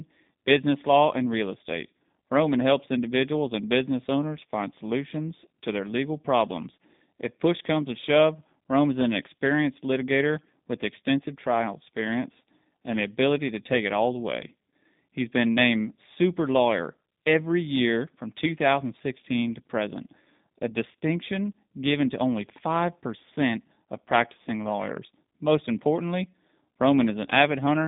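Throughout, G.729 codec coding squeezes the speech into sparse pulse-driven frames that point to 8 kbit/s, leaving it rough and synthetic with nothing above 3.8 kHz, unlike plain band-limiting.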